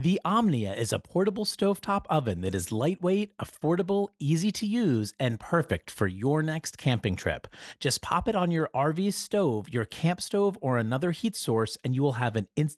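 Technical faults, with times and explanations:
Nothing stood out on listening to this speech clip.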